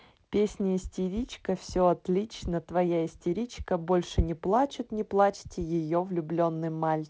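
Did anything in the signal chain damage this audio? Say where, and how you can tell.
No, nothing in the chain damaged this speech; it passes through G.722 wideband telephone coding, whose light coding noise and roughly 7 kHz bandwidth fit a reduced-rate mode of that codec working as designed.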